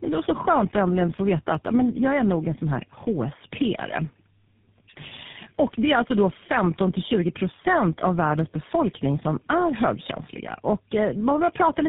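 From start to finish the speech has that chewed-over phone sound of tandem speech coding. It sounds like the call went through three separate low-rate speech codecs in a row, which fits a chain of GSM full rate and AMR-type coders joined by ordinary telephone links. Each stage re-encodes the previous one's damage, so the voice comes out rough, muffled and a bit warbly. Nothing survives above about 3.8 kHz.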